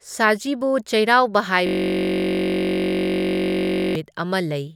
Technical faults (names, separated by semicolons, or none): system hang loop